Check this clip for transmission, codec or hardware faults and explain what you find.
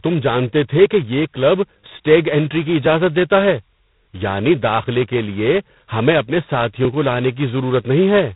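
Two faults are audible in this speech clip: a heavily degraded low-rate telephone codec throughout, and a regular series of tiny dropouts.

G.726 ADPCM, throughout the clip: the codec sends only a coarse difference between each sample and an adaptive prediction of it. The damage here is heavy, consistent with the 16 kbit/s mode at 2 bits a sample, where quantisation noise is high. It is heard as a harsh, rasping hiss that rises and falls with the speech level. The band stops at about 3.9 kHz, so nothing above passes and the speech sounds muffled and boxy.

Periodic USB or driver dropouts, from 0.86 s to 7.85 s: about seven losses occur roughly once a second, at a steady interval of about 1.0 s. Each time, something blocks the audio bus or driver briefly and a sliver of signal is skipped, roughly 4 ms long. No silence is inserted; the waveform simply jumps ahead. That discontinuity sounds like a small tick or click at a metronome-like pace, noticeable only where speech is present.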